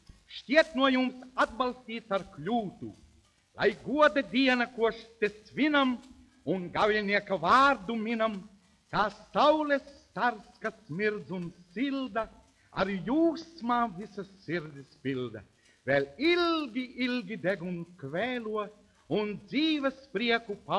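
From 14.55 s to 18.9 s the audio carries a steady tick pattern at 20 Hz, heard only while sound is present. This is a resampler restarted on every block. Each 50 ms block was converted alone, which fits a 48 kHz to 24 kHz conversion, leaving an error at every block edge.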